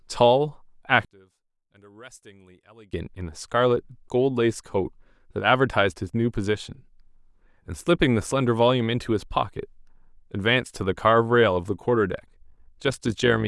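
One channel inverted, from 1.05 to 2.93 s: the speech collapses by about 28 dB to a faint residue. The likely cause is one stereo side with reversed polarity, so the shared centre content cancels when the channels are summed to mono.

Overlap-add ripple, from 12.12 s to the end: the level pulses by about 6 dB around 50 times a second, giving a rough flutter. The windowed frames were reassembled with an overlap that fails to sum to constant gain.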